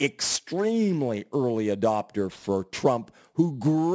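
A speech clip with aliasing throughout. Sibilants sound gritty and metallic, and energy runs hard up to 8 kHz. That fits a drop to a 16 kHz rate without a low-pass filter first. Content above 8 kHz folds back into wrong frequencies, roughly 20 dB below the speech.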